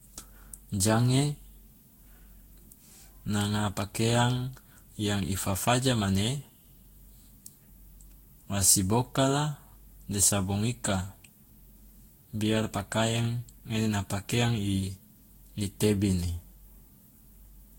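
Throughout the speech, the sound is swirly, smeared and hollow, with blurred consonant onsets, likely generation loss from around seven passes through a lossy codec, which fits Vorbis near 63 kbit/s. A spectrogram shows patchy spectral holes and nothing above 16.6 kHz.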